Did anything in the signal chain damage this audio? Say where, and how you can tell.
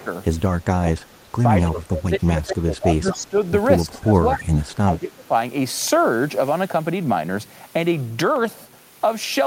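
Yes, in the call processing. The speech dips at 0 to 0.07 s (about 15 dB), 0.6 to 1.02 s (roughly 30 dB deep), then 1.64 to 3.37 s and 3.85 to 5.33 s (about 20 dB). That's likely speech suppressed in double talk, with the canceller ducking everything while both sides spoke.

There's also a faint repeat of the speech at 1.62 to 1.81 s and 3.08 to 3.17 s, sitting about 15 dB under the speech and trailing it by 234 ms. Likely an echo leak, with the far end's loudspeaker pickup getting past its echo canceller and sent back.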